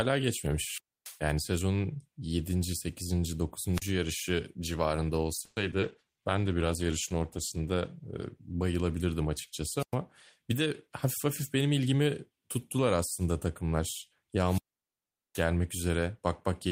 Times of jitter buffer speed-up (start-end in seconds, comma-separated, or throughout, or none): 10.53-12.49